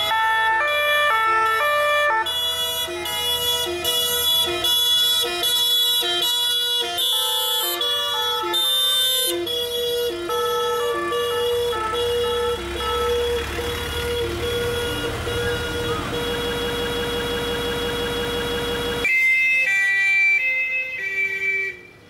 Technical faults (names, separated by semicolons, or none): broken-record loop